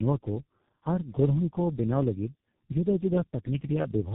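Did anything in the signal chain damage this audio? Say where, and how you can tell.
Yes: tandem speech coding throughout, at the codec stage. Three speech codecs in series, ending in G.723.1, each re-encoding the last one's output, leave the speech rough, muffled and warbly, with nothing above 3.8 kHz.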